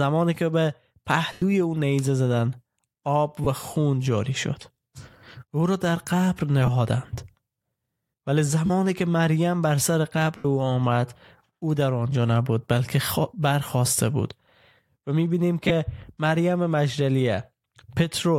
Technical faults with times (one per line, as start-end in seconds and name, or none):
1.32-1.42 lost LE Audio frames
3.44-3.47 lost LE Audio frames
6.66-6.69 lost LE Audio frames
8.66-8.70 lost LE Audio frames
10.37-10.45 lost LE Audio frames
15.68-15.71 lost LE Audio frames